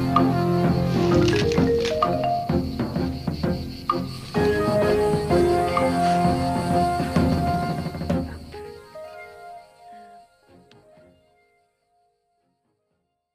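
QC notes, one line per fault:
No faults heard.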